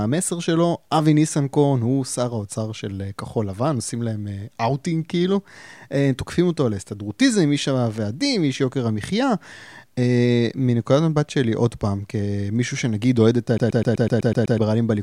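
From 13.58 to 14.58 s the speech sticks like a CD stuck on one turn. A 125 ms fragment repeats eight times, each jump back marked by a brief mute.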